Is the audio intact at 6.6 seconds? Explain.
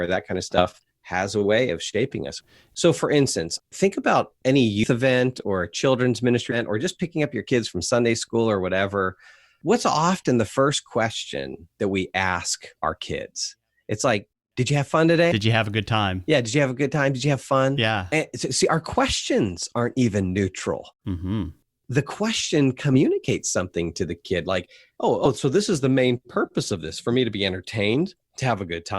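No. Just before that point, from 6.51 to 6.56 s, the speech suffers compressed frames skipped: around ten frames of the encoded stream were lost or rejected by the decoder, so about a fifth of a second of audio never plays and the sound lurches forward, consistent with 20 ms codec frames. Unlike a dropout there is no silent gap; the audio simply jumps ahead at the cut.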